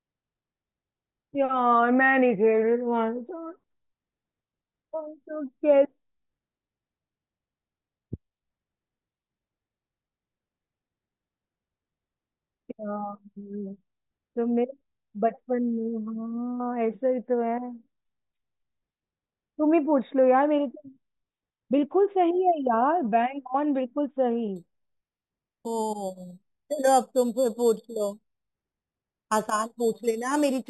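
It's a speech clip, and from 24.56 s to the end it picks up imaging from sample-and-hold upsampling: a bright, metallic fizz that rises and falls with the talker. It sounds like each sample was simply repeated to raise the rate, which fits 8 kHz audio stepped up to 48 kHz. The mirrored copy fills 4 to 8 kHz at about 17 dB below the speech, and its movement runs opposite to the real pitch.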